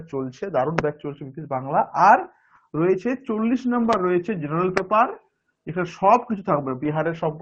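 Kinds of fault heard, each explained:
Loud pop: A single sharp pop sits on top of the sound at about 0.79 s and again at about 4.78 s, each lasting around 20 ms and peaking roughly 20 dB above the surrounding signal, while the audio carries on unbroken underneath. The cause is likely a brief voltage step or pulse, such as a connector, switch or static discharge, entering the signal chain and being shaped by the circuitry after it. Both pops pass through the band-limited call codec path.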